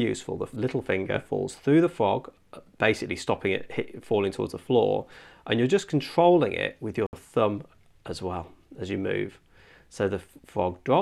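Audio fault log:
7.07 to 7.13 s, Bluetooth stall: the sound just drops out for about 65 ms, then carries on from where it stopped. That's likely a Bluetooth hiccup, with packets held up by interference so the headphone buffer ran dry until the resends arrived.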